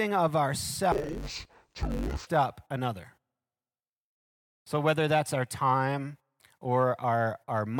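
Interleaved audio read as planar affects this speech clip from 0.92 to 2.27 s: each 10 ms block of alternating left and right samples was split into halves as if stored channel by channel. That leaves the speech dull and robotic, buzzing at 100 Hz with no clear octave drop.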